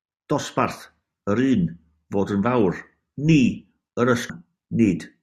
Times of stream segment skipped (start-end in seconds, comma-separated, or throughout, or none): 4.29